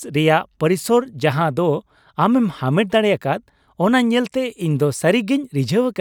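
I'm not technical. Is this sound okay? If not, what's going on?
Yes, nothing wrong can be heard in this recording.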